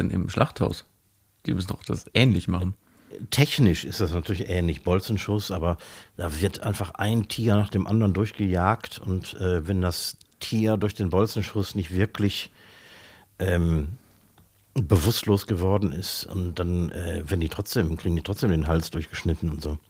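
The speech has no technical faults, and the only processing audible is light Opus voice compression that keeps the full audio band.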